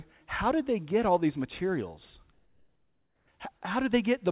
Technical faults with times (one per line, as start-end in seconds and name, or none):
2.33-3.27 comfort noise in place of the background